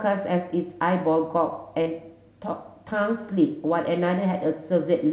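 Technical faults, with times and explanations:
0.38–0.41 s and 1.81–1.88 s, short concealed packet loss: Two brief gaps open in the speech, about 20 ms and then 40 ms. The receiver patched each one by stretching the preceding sound, repeating its pitch where voiced and using shaped noise where not, then faded back into the real signal. That patch is heard as a quick smear or wobble, and a short consonant may drop out. The band stops near 4 kHz, which fits a G.711 call path.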